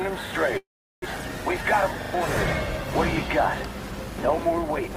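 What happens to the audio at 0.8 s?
At 0.8 s you're inside a call audio freeze, 0.57 to 1.04 s: the sound smears into a fading buzz, drops to near silence, then resumes intact, likely from delayed packets.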